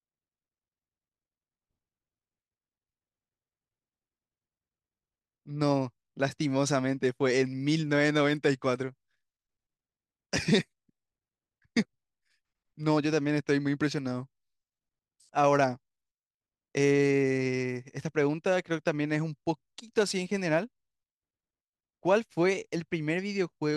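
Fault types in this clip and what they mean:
No technical faults can be heard anywhere in the recording. There is nothing here to list under any fault type.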